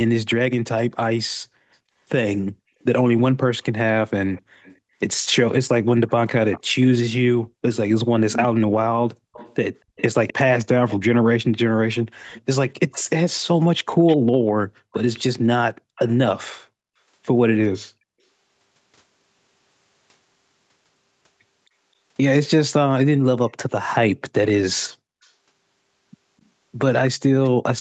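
Echo leak at 2.82 to 4.77 s: a faint copy of the speech trails 258 ms behind, about 30 dB down, likely leaking back from a far-end loudspeaker that the echo canceller did not fully suppress. It returns from 6.08 to 10.96 s much more clearly, about 10 dB below the speech. From 12.3 to 16.14 s it is about 20 dB down, and from 23.49 to 25.32 s about 25 dB down, each time with the same 258 ms lag. Background gated by the echo canceller at 15.68 to 15.9 s: the room sound drops out for roughly 200 ms, by up to about 40 dB, as the canceller clamps the microphone, then comes back.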